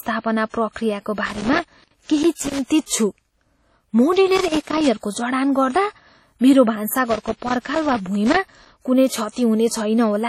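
Throughout the speech, heavy ringing, washy smearing and signal-following hiss with nothing above 16.5 kHz point to likely WMA compression at a low bitrate near 32 kbps. Loose connector crackle, irregular scratchy bursts from a contact making and breaking, chops the signal from 1.26 to 2.59 s, 4.36 to 4.87 s and 7.10 to 8.76 s.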